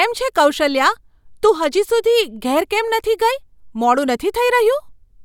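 A short bit of speech, and there's nothing technically wrong to report here.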